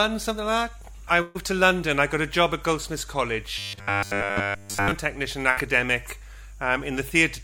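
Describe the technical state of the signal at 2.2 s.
At 2.2 s the signal is intact, with no audible fault at that moment.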